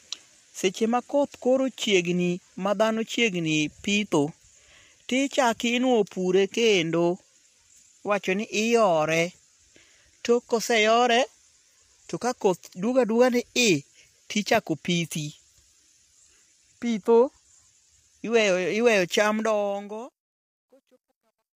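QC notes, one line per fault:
Throughout: low-delay AAC compression, likely AAC-ELD near 32 kbps; plainly audible roughness, noise filling between harmonics, spectrogram shows smeared inter-harmonic energy and a synthetic-looking top band.
19.28–21.56 s: truncation distortion on a fade, the fade's level stage keeps about 11 bits without dither; worst from 20.33 s, waveform turns to coarse square steps, sounding gritty.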